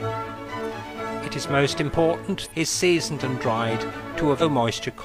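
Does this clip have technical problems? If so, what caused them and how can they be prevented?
Yes. Damaged data in a compressed stream made the decoder misread frames and lose sync, producing brief glitches at 2.42–2.48 s and 4.37–4.43 s. Checksummed transport and intact, uninterrupted file transfers prevent this.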